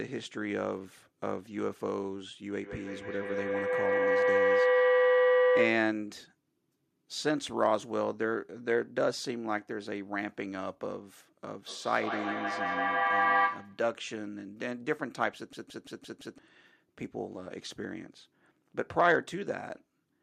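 From 2.62 to 6.1 s, two devices in the same room joined to the call form a loop from microphone to loudspeaker and back, and each pass adds level. This is feedback howl. Instead of dying out, the sound narrows to a tone of roughly 500 Hz that rises to about 6 dB above the speech. It pulses at around 150 ms, the delay of one trip round the loop, until the loop is broken.

At 11.68 s two devices in one room set up feedback echo between two devices. One plays what the other's microphone sent, and that microphone picks it up again. Each device's echo canceller removes only its own playback, so this returned signal passes through. Until 13.9 s the speech comes back at roughly 150 ms intervals, thinner and more ringing each time. The repeats stack up to about 5 dB above the direct speech rather than fading.

From 15.53 to 16.38 s the computer or its audio driver stalls while the sound hardware keeps cycling the same ring buffer. 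This is a system hang loop. A 170.67 ms slice of audio replays exactly, five times, which fits an 8192-sample buffer. At a repeat rate of 5.86 Hz it comes across as a mechanical stutter rather than a buzz. Around a second of the real audio is lost behind it.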